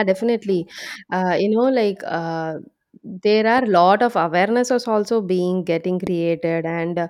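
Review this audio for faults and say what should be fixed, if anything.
Two loud pops hit at 3.58–3.60 s and, louder, about 10 dB over the speech at 6.07–6.09 s, likely voltage spikes from cabling or static. Seat connectors firmly and keep hands off switches and cables while recording.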